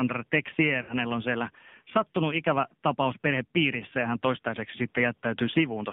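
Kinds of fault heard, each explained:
AMR narrowband mobile codec: The speech is squeezed into a 150 Hz to 3.6 kHz telephone band and rebuilt from a pulse-driven vocal tract model, giving a plainly audible buzzy, synthetic edge that fits a low mode around 7.4 kbps. Unlike simple low-pass filtering, the timbre itself is coarsened.
Lost AMR speech frames: From 0.82 to 0.95 s, just before "on siellä sattunut ikävä", the decoder stretched the last good pitch and vocal tract settings while lowering gain, so the sound smears and sags for about 60 ms, which fits three lost frames. A dropout would instead go abruptly silent.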